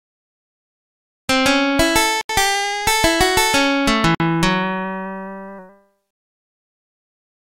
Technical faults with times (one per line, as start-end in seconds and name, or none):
2.21-2.29 Bluetooth stall
4.15-4.20 Bluetooth stall